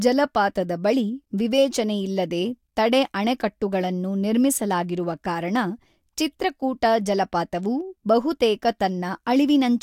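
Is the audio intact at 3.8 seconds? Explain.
Yes, the speech at 3.8 seconds plays through intact, with no audible fault at that moment.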